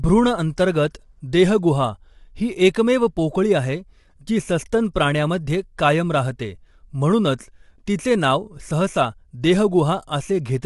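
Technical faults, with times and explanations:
Throughout: low-delay AAC compression. The speech sounds rough and grainy, with noise filling the gaps between pitch harmonics and nothing above 11.6 kHz. This is likely AAC-ELD at around 32 kbps, whose short frames resolve harmonics poorly and leave too few bits.
4.94 s: pre-echo. Between "पोकळी आहे जी सस्तन" and "प्राण्यामध्ये कायम राहते म्हणूनच", a brief hiss of about 18 ms leads into a sharp attack, which sounds softened. The codec spread quantisation noise sized for the loud onset across the quiet stretch before it.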